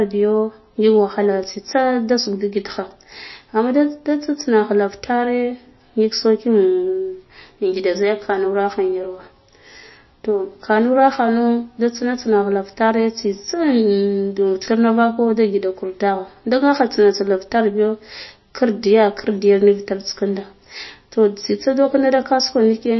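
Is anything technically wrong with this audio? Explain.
Yes. Across the whole speech clip the treble stops dead at about 5.8 kHz, and what remains sounds watery and swirly, with chirpy, metallic s sounds and softened consonant attacks. This is likely MP3 compression at a low bitrate, somewhere around 25 kbps. Short of bits, the encoder drops everything above a fixed cut-off and zeroes quiet frequency lines, which flicker on and off between frames. That flickering swirl is what sets it apart from a plain low-pass filter, which dulls the sound cleanly.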